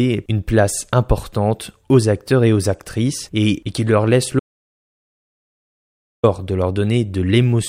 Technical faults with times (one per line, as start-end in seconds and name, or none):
4.39-6.23 audio dropout to silence